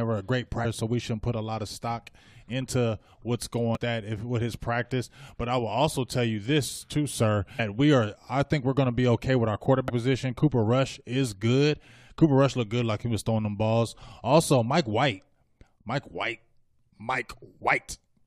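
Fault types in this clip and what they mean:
Damaged data in a compressed stream: corrupted bytes make the decoder misread frames and lose sync, giving brief blips in the speech at 0.64, 3.75–3.77, 7.58 and 9.88–9.90 s. Each lasts about 20 ms and appears as a thin vertical streak on a spectrogram and an abrupt discontinuity in the waveform.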